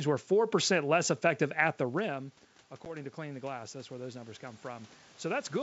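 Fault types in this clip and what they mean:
automatic gain rising: the gain control sensed a weaker input after the talker moved off the microphone and lifted its gain about 6 dB, so voice and background swell together from 1.78 s.
packet loss on an ADPCM call: a 10 ms packet went missing and the decoder's predictor lost sync, leaving a hard-edged gap near 2.85 s, then slightly distorted speech that settles within some tens of milliseconds.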